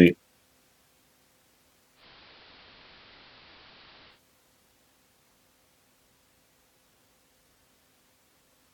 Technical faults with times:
1.94-4.20 digital radio blending to analogue

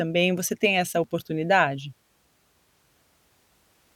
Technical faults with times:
1.04 dropped buffer (overrun)
2.32 dropped buffer (overrun)

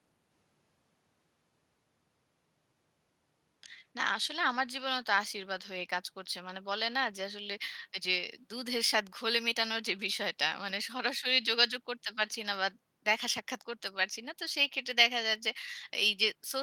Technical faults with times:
none

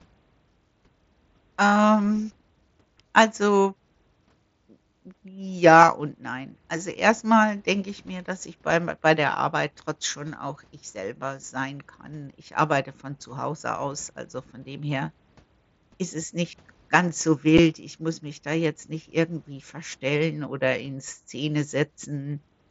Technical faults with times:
17.58 unconcealed Bluetooth headset packet loss

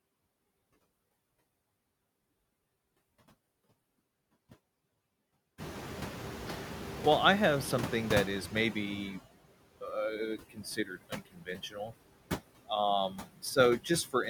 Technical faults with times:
0.00-14.30 noise suppressor artifacts
5.58-9.21 noise suppressor catching up
10.38-11.92 speech cut by the noise suppressor
13.10-13.23 speech cut by the noise suppressor

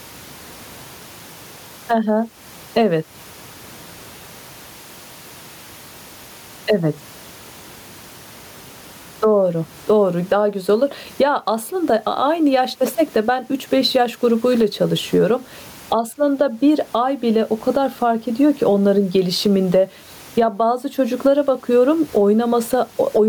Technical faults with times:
0.00-23.29 gain pumping

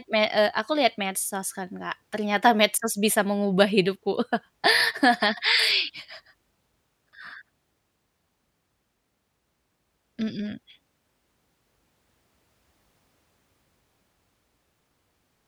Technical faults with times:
none

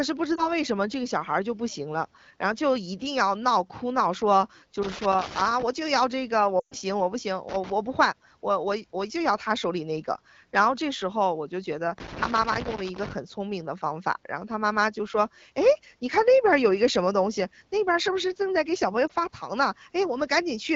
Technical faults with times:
0.36-0.49 lost AMR speech frames
4.83-5.63 loose connector crackle
6.59-6.76 lost AMR speech frames
7.49-7.72 loose connector crackle
11.98-13.13 loose connector crackle
19.08-19.11 lost AMR speech frames

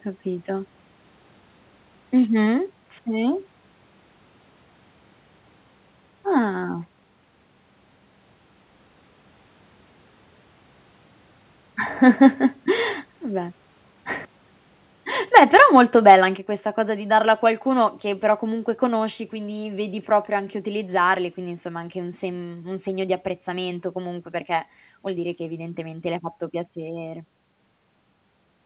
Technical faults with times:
2.46 microphone volume stepped down
15.35-15.78 microphone overload
15.38 microphone volume stepped down
16.09-16.15 microphone overload
16.38 microphone volume stepped down

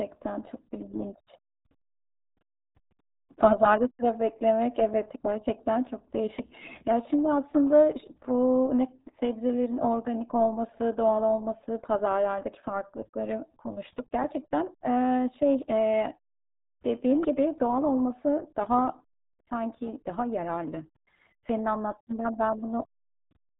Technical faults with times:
0.00-23.60 RealAudio 14.4 codec

